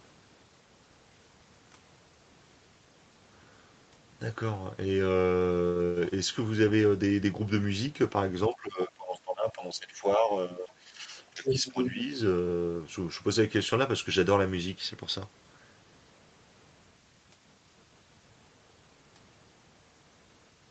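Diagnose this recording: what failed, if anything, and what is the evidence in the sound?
Speech suppressed in double talk, 8.49 to 11.13 s and again 11.3 to 12.1 s: the talker's level sinks by up to about 15 dB in patches totalling around two seconds, then under half a second. This is call processing, likely the echo canceller attenuating near-end speech while the far end talked.

Other side's voice leaking through, 11.34 to 11.9 s: a second voice surfaces at roughly the talker's own level, inside the second suppressed stretch. Also call processing: the echo canceller likely left part of the loudspeaker signal picked up by the microphone unremoved.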